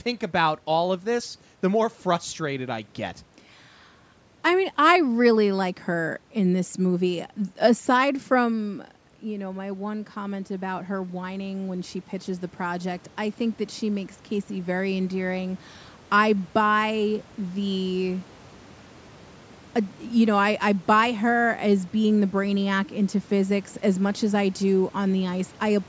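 Around 8.5 s the talker moves back, and the voice drops by about 12 dB. From 8.6 to 15.71 s, automatic gain rising follows. The gain control hears a quieter input and slowly adds about 9 dB. Voice and room noise swell up together.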